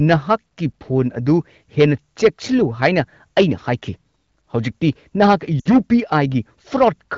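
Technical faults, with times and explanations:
1.80 to 2.28 s, 2.83 to 3.00 s and 4.85 to 6.18 s: hard clipping. Peaks overdriven by about 8, 5 and 7 dB are cut flat, adding high harmonics heard as harsh fuzz on loud speech.
5.59 to 5.73 s: lost AMR speech frames. A 60 ms gap, which fits three dropped wideband frames, is bridged by the decoder repeating the last sound with falling gain. This makes a brief drop to near silence inside the clipped stretch.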